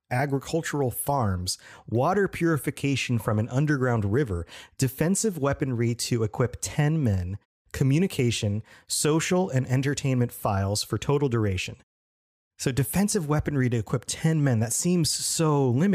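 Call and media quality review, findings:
Nothing stood out on listening to the speech recording, and no findings were raised.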